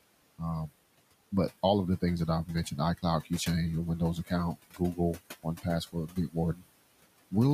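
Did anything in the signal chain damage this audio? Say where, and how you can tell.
Yes. At the call-processing stage, noise suppressor artifacts run through the whole clip. The room noise, about 18 dB under the speech, is pulled down by about 20 dB between phrases and swells back under them. On a spectrogram the noise floor empties in the gaps and leaves a patchy, flickering residue.

The same suppressor also produces speech cut by the noise suppressor at 3.99–4.32 s, 4.55–4.99 s, 5.92–6.36 s and 6.54–6.66 s. It misjudges quiet speech as noise, so soft sounds come out swallowed, with drops of up to about 22 dB. Each cut lasts roughly a tenth to a fifth of a second. The waveform envelope sags there, and the spectrogram shows holes in the weak consonant energy.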